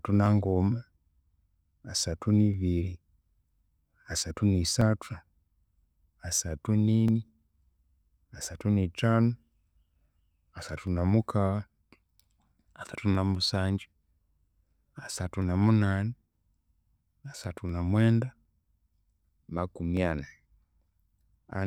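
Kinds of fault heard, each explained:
Clock drift buffer slips: from 0.26 to 21.48 s, a regular click roughly every 0.76 s in the speech, likely from two clocks about 1000 ppm apart slipping small sample blocks.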